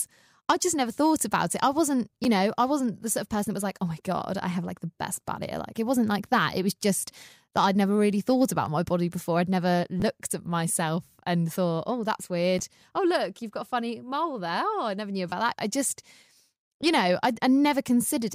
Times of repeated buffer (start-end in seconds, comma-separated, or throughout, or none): 2.24, 8.66, 10.00, 12.59, 15.30